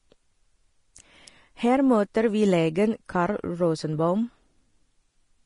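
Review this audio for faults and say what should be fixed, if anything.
Likely low-bitrate Vorbis compression throughout, consistent with about 30 kbps: nothing above 10.5 kHz, and coarsely quantised treble leaves the speech plainly hissy and grainy. Encode at a higher Vorbis quality setting, or keep an uncompressed master for delivery.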